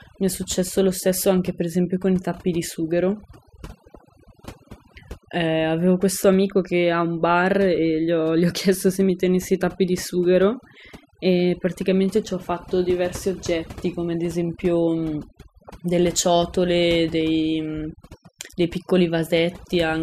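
Overdone noise removal runs through the whole speech recording: the noise reduction was pushed so hard that individual frequency bands close to its noise estimate are pulled far down or shut off, taking quieter voice detail with them. Pauses sink to near silence scattered with twinkling specks.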